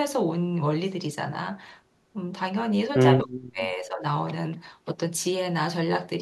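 Speech suppressed in double talk, from 3.23 to 4.05 s: the speech sinks sharply for most of that stretch, falling by around 40 dB at its deepest. The likely cause is an echo canceller that, with both sides talking at once, mistook this talker for loudspeaker echo and turned it down.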